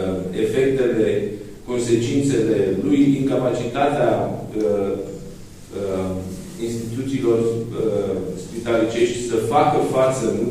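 No technical faults can be heard anywhere in this recording.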